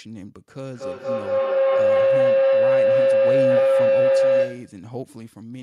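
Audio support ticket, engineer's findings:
Feedback howl, 0.75–4.86 s. Tone near 500 Hz builds to about 14 dB above speech, pulsing roughly every 200 ms. Probable second device in room: mic-to-speaker loop gains level each pass. Spectrogram shows beaded horizontal band; waveform shows swelling envelope.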